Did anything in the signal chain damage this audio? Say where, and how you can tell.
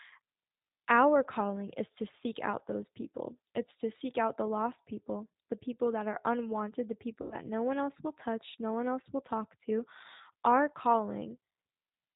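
Yes, at the codec stage, throughout. It has the G.729 sound: nothing above 4 kHz, and speech that's clear enough but rough and a bit synthetic, which fits an 8 kbit/s codec rebuilding each 10 ms frame from a filter, pitch predictor and a few pulses.

There's also VoIP packet loss concealed by the speech codec, on the network side, from 7.22 to 7.37 s, between "that are unwanted the" and "no one else will". About 90 ms went missing, which fits three lost packets. The decoder stretched its last frame into a fading buzzy tone or coloured noise, and the voice stays weak briefly afterwards.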